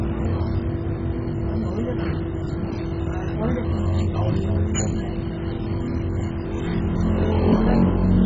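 From start to finish the sound is dull and gurgling, with a grainy, churning texture. Nothing reaches above 7.5 kHz. Upper bands flicker in and out. This heavy damage is likely MP2 compression, which fits a very low bitrate near 16 kbps.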